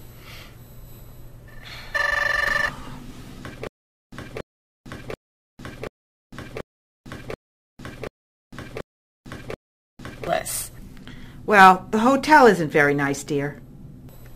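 From 3.67 s to 10.27 s there is stutter with silent gaps: a 282 ms fragment repeats nine times, each followed by about 452 ms of digital silence, every 733 ms. This is likely a stalled stream replaying its last buffer, losing the intervening audio.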